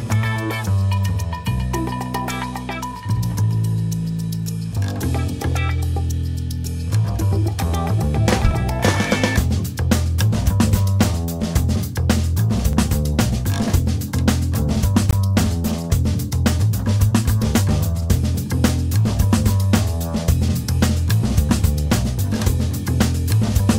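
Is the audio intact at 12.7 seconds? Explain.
No. At 12.73 s a 5 ms block of digital silence cuts the sound out with hard edges, heard as a single tick rather than an audible hole.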